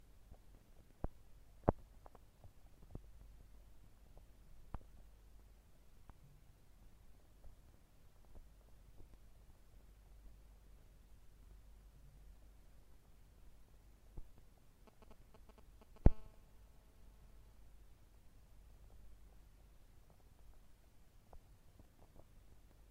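GSM signalling bursts appear from 14.87 to 16.07 s. A 2G phone close to the recording chain is sending short clusters of radio bursts, the kind it emits while it registers with the network or before a call connects, and the audio circuitry rectifies those pulses into sound. The result is a galloping dit-dit-dit of short 217 Hz buzzes, sitting roughly 15 dB below the wanted sound.

GSM phone buzz takes over at 16.08 s and runs to 17.55 s, as the same phone moves into a call and transmits continuously in bursts 217 times a second. Rectified by the audio electronics, the pulse train becomes a steady, hard, raspy 217 Hz buzz with a dense stack of harmonics that has nothing to do with the recorded material. It sits about 24 dB below the signal.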